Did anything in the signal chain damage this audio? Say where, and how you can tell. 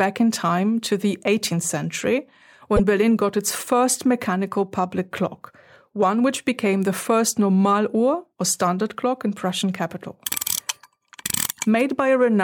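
Yes, at the codec stage. At 2.76 s the speech breaks for a moment, and the disturbance ends by 2.80 s. That is about 42 ms, less than two frames of roughly 26 ms each. The audio jumps ahead across the gap. The likely cause is a broken MP3 bit reservoir. Frames were lost, and the next frame looked back for borrowed bits. It decoded bytes from the wrong frame, which produced the brief disturbance.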